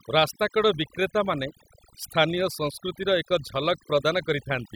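Throughout the speech, overdone noise removal leaves the pauses near-silent with twinkling specks, unlike broadband filtering, which dulls evenly without flickering artefacts.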